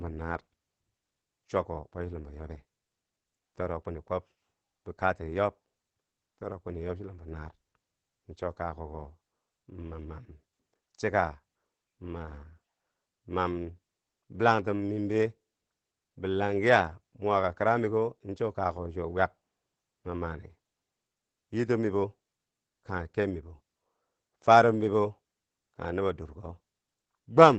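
From start to finish the speech sounds muffled, hoarse and faintly robotic, the plainly audible mark of Opus voice compression. The wideband SILK linear-prediction coder, working in 20 ms frames, codes the excitation coarsely, which fits a low bitrate of about 12 kbps.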